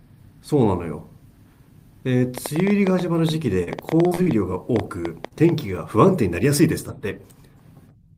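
Ticking and popping run over this speech clip from 2.38 to 5.50 s, at an uneven pace of about 7 clicks per second, some twenty in all, the loudest around 10 dB above the speech. This train of clicks is likely interference from nearby equipment or a faulty connection or power supply. Brief smears and wobbles occur at 3.63–3.70 s and again in a tight cluster at 4.07–4.14, 4.15–4.21 and 4.22–4.29 s. These are short concealed packet losses: each time about 40 ms of audio never arrived, and the receiver filled 32 to 39 ms by continuing the preceding sound before blending back. At 5.28–5.34 s a sound is held too long with a slight buzz. This is a short stall from a late packet: the jitter buffer ran dry, the last sound was stretched for 33 ms until the packet arrived, and nothing was lost, though playback now runs 33 ms later.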